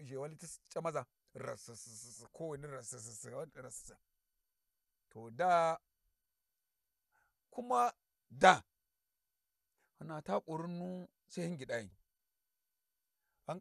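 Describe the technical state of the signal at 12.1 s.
At 12.1 s the speech sounds dull and gurgling, with a granular roughness and nothing above 12.2 kHz, as it does throughout. This is likely MP2 compression, which fits a rate of about 80 kbps: starved sub-bands switch off and the remaining ones are coarsely quantised.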